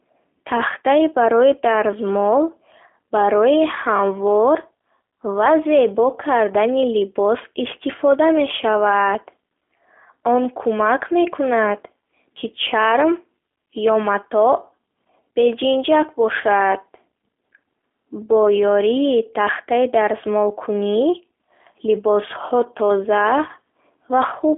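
From start to finish the speech carries G.729 codec coloration, the narrowband, model-based coding used on VoIP links, here at a rate that fits 8 kbit/s. The sound is held to a telephone band of roughly 300 Hz to 3.4 kHz, with nothing at all above 3.6 kHz, so sibilants lose their edge. Because the encoder rebuilds each short frame from a filter and a few pulses, the damage is plainly audible as a rough, buzzy, slightly synthetic texture.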